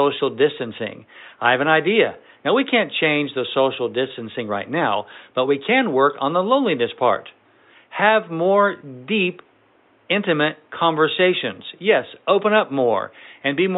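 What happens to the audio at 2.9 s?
At 2.9 s the speech carries on intact, with only the faint room noise of the recording space, about 39 dB below the voice, sitting underneath it.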